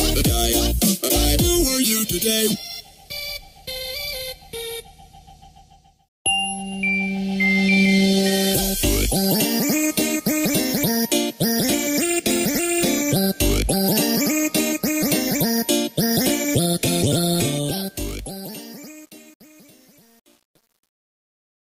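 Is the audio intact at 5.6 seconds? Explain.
Yes, the audio at 5.6 seconds is intact, with no dropout, click, distortion or other fault at that moment.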